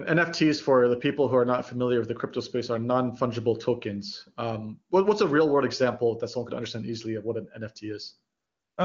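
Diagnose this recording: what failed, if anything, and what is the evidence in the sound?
AMR comfort noise, a call-processing fault in the codec's discontinuous transmission: from 8.37 to 8.77 s the real background drops out for 0.4 s and is replaced by a steady, smooth synthetic hiss, because no speech frames were sent. Unlike a dropout, the gap is filled rather than silent, and unlike packet-loss concealment it holds no buzzy speech-like residue.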